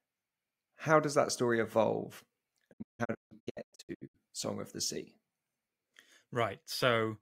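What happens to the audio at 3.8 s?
A digital broadcast dropout is under way at 3.8 s, part of a disturbance running from 2.72 s to 4.16 s. The receiver is failing to get clean frames and mutes whenever one is missing or corrupt, so the speech breaks into a series of short holes scattered over about 1.4 s. Together they remove about 860 ms of audio, the longest gap lasting 160 ms. Each cut fades out over 20 ms, and the missing sound never returns.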